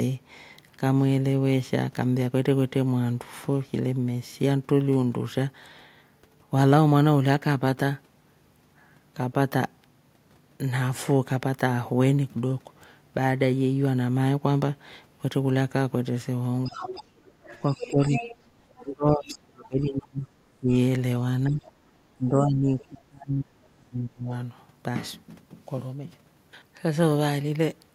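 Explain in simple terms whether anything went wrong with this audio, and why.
From 16.65 to 19.67 s a second, fainter voice can be heard underneath the talker, with two tiny scraps of it again at 21.66–21.71 s and 22.79–22.84 s. This is the other side's voice leaking through, likely because the talker's loudspeaker was picked up by the microphone and the echo canceller missed part of it.

Between 16.67 and 24.32 s the talker's own voice keeps dipping sharply or breaking up, for around four seconds in all. This is speech suppressed in double talk, likely because both people spoke at once and the echo canceller turned everything down.

From 17.11 to 17.37 s the room sound briefly drops away and then comes back. This is background gated by the echo canceller: while the loudspeaker was playing, it clamped the microphone down for that moment.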